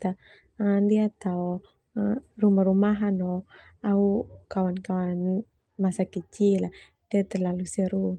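No technical faults can be heard in this speech recording.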